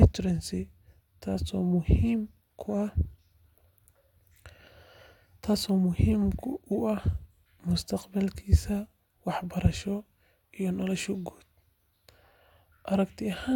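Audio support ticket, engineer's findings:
No audible faults found in the speech clip. No component flagged; nothing to escalate.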